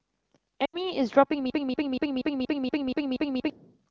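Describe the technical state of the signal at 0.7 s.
Lost AMR speech frames cover 0.65 to 0.76 s, a gap of about 80 ms, which fits four consecutive 20 ms frames failing their checksum. With nothing valid to decode, the AMR wideband decoder keeps reusing its last good pitch and vocal tract settings while stepping the gain down, so the speech at 0.7 s drops quickly to near silence. When good frames resume, the speech returns briefly weak or rough.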